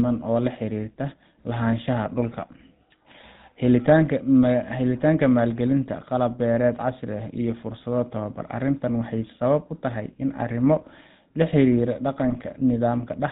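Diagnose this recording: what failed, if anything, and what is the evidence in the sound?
A buzzy, gravelly roughness runs through the whole recording with nothing above 4 kHz: the GSM full-rate codec at the codec stage, whose coarse pulse-driven excitation at 13 kbps plainly degrades the speech.

A brief squawking, gargling burst from 12.30 to 12.37 s is GSM bit errors on the radio link, where corrupted filter, pitch and gain values distorted what fits about three decoded frames.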